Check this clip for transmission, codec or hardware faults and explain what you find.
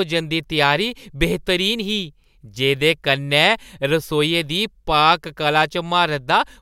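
Nothing in this speech recording sounds faulty.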